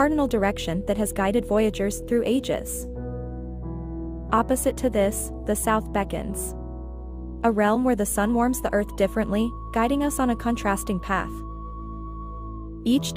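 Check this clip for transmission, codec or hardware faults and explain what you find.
Nothing in the transmission, codec or hardware chain stands out as a fault here; the audio holds together the whole way with nothing that needs explaining.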